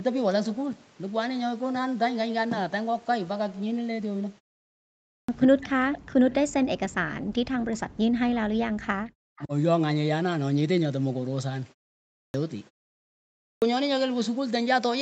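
At 5.14 s, after a pause of about 0.82 s, the speech bursts in abruptly with its opening sounds missing: roughly 145 ms is gone before 5.29 s. This is a clipped start after a pause. During the silence the playback device idled and needed time to wake and resynchronise, so the first part of the returning signal was swallowed rather than delayed.

From 5.46 s to 9.53 s the speech keeps sinking and cutting out in pieces, about 4 s affected in all. At its deepest it falls by around 40 dB, nearly vanishing. This is speech suppressed in double talk, likely from both ends talking at once. The echo canceller could not tell the local talker from the loudspeaker return and turned everything down together.

Near the end of that stretch, from 9.37 to 9.46 s, a faint, brief delayed copy of the speech slips through, lagging about 300 ms and sitting roughly 25 dB below the main signal. This is an echo leak, likely from the far side playing the call on a loudspeaker. 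Its canceller failed to fully remove what its microphone picked up, and that remnant was sent back.

The clipped start returns twice more. At 12.18 s, after a 0.52 s pause, about 161 ms is cut off, with the speech resuming at 12.34 s. At 13.47 s, after a 0.85 s pause, about 150 ms is missing until 13.62 s. Each time the onset snaps in from silence without its beginning, because the output path again had to wake before it could play.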